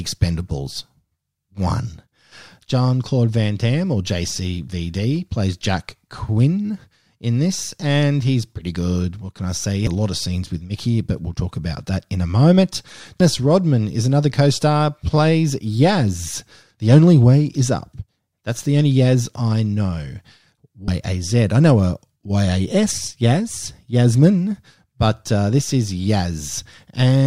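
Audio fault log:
9.87 s, 13.20 s and 20.88 s: damaged data in a compressed stream. Each is a very brief chirp or blip in the speech, lasting only a few milliseconds. The first comes just before "a lot of scenes", and the second comes right after "that in a moment". Corrupted bytes in the compressed stream cause the decoder to misread those frames and lose sync. It then searches for the next valid frame header, producing the glitch.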